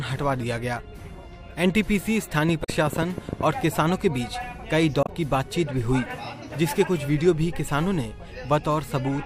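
From 2.49 to 3.42 s a train of clicks ticks over the sound: about ten sharp pulses arriving at 10.6 per second but unevenly spaced, peaking about 10 dB above the signal. The likely source is interference from nearby equipment or a faulty connection or power supply. The pulses share one shape and repeat, which separates them from stream damage.

Inside that run, from 2.61 to 2.69 s, and again from 5.01 to 5.09 s, damaged data in a compressed stream produces a short glitch. Corrupt frames are misread, so the decoder loses sync and searches for the next frame header. Each is a single brief event, not a repeating tick.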